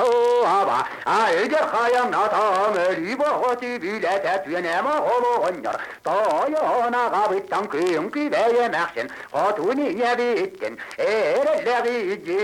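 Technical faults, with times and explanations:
No technical faults can be heard, so there are no times or explanations to give.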